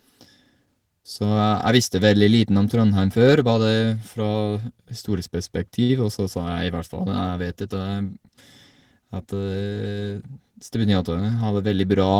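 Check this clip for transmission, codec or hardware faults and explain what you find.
Two transmission faults stand out in this speech clip.

From 5.83 to 5.91 s there is a short stall from a late packet: the jitter buffer emptied, so the receiver stretched the last sound for 57 ms until the packet arrived, then resumed. Nothing is lost, but that sound is held too long, with a slight buzz or dip, and the delay grows by 57 ms.

From 11.10 to 11.50 s there is a jitter buffer speed-up: with more audio queued than the target, the receiver cut repeated pitch-period slices, about 50 ms in total. Speech runs at 112% speed with unchanged pitch and sounds briefly hurried.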